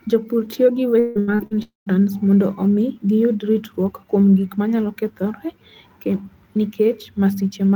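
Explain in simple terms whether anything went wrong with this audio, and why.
Yes, two things went wrong. From 0.99 to 1.54 s, just after "tiyo gi", the speech turns choppy and robotic. This is repeated packet loss: four short gaps, the longest 160 ms, each patched by stretching the last sound, so over half that stretch is filler.

Right after that, from 1.63 to 1.89 s, there is a single longer hole before "mondo omi giyud ritruok". The sound smears into a fading buzz or hiss, then about 150 ms of silence, and speech resumes with a piece missing. One unbroken gap like this, rather than many small ones, likely points to a long network dropout.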